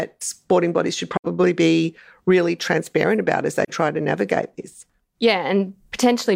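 AAC frame loss with muting breaks this speech clip twice, from 1.16 to 1.26 s after "sporting bodies should" and from 3.64 to 3.70 s after "really transparent about as". The gaps last about 85 ms and 43 ms, which fits two lost frames and then one. The decoder zeroed the missing spectrum, and the overlapping windows taper the sound down and back up, so the first gap is a soft-edged hole and the second a brief dip.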